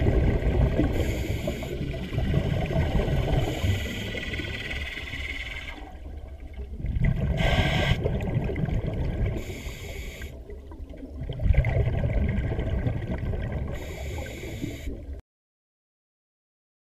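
Nothing is technically wrong with this clip.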